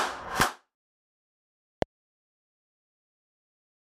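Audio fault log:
0.40–0.42 s and 1.82–1.84 s, loud pop: each is a single sharp pop lasting about 20 ms and peaking about 20 dB above the surrounding sound, which carries on unbroken beneath it. A sudden voltage pulse has been added to the signal, likely from a plug, switch, static discharge or driver glitch, and the following circuits shape it. Unlike a dropout or a digital click, nothing is missing: the burst sits on top of intact audio.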